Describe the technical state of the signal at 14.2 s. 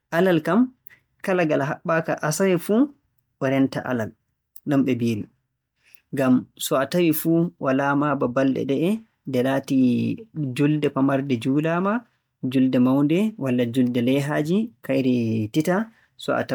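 At 14.2 s the speech carries the generation loss that runs through the whole clip: a swirly, hollow smear with softened consonant attacks, content up to about 20.2 kHz. It most likely comes from around five MP3 passes, each re-quantising on a shifted frame grid, which fits a 128 kbit/s chain.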